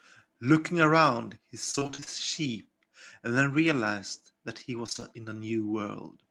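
Between 1.71 and 2.08 s the speech turns choppy, with pieces of sound missing and the gaps bridged by a robotic smear. This is repeated packet loss: holes up to 32 ms long kept arriving, each patched by extending the last sound, so about half of that stretch is concealed audio. A shorter burst of the same fault between 4.86 and 5.04 s conceals about 42 percent, with gaps up to 19 ms.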